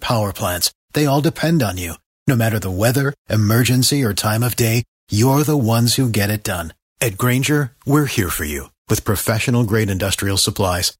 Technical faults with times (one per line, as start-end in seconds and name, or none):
none